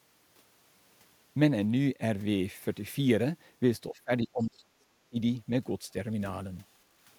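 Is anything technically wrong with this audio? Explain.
Yes, there are two faults. From 3.90 to 5.17 s, there is speech suppressed in double talk. When both ends likely spoke at once, the echo canceller couldn't tell the talker from the loudspeaker echo and turned everything down. For about a second in total, the speech sinks or breaks up, falling by up to around 35 dB at its deepest.

From 4.42 to 4.47 s, inside that stretch, the other side's voice leaks through. The echo canceller likely left a residue of the loudspeaker signal in the microphone feed. A brief, very faint scrap of that second voice comes through, roughly 40 dB below the speech.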